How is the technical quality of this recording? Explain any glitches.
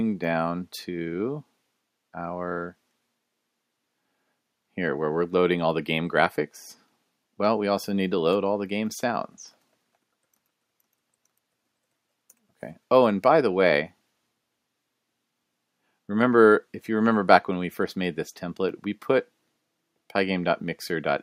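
No technical glitches are audible.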